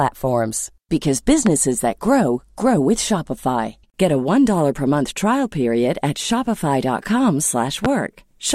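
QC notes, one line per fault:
1.47–1.50 s and 7.85–7.88 s, loud pop: a sudden voltage step or pulse entered the chain, likely from a plug being moved, a switch, a static discharge or a driver glitch, and the following circuits shaped it into a brief burst. Each event is a single sharp pop, about 15 dB above the speech and lasting roughly 30 ms, with the speech continuing underneath. The first lands just before "that grow grow".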